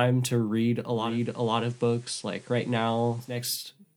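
Digital radio blending to analogue runs from 0.88 s to 3.59 s, just after "to read": the receiver lost its digital stream and cross-faded over about 0.39 s to the FM broadcast, bringing faint hiss well below the speech and a level drop of about 1 dB.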